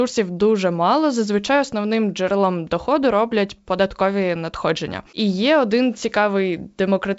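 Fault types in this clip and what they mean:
No fault types are present in this clip; the speech comes through G.722 wideband telephone coding at 64 kbit/s as intended, with its band ending near 7.7 kHz.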